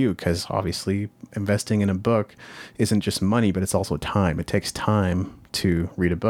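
Nothing stood out on listening to this recording of speech.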